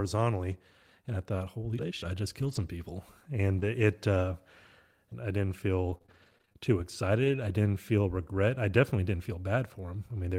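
From about 0.51 s to 7.38 s, the speech shows scattered short gaps. Roughly ten tiny holes open up, none longer than about 20 ms. Each comes from a lost or late packet. The receiver hides each hole by stretching the last bit of sound forward. In all, about 180 ms went missing and 460 ms was rebuilt. Timing drifts by 11 ms. You hear brief ticks and small smears. The stretch ends just before "I didn't feel regret".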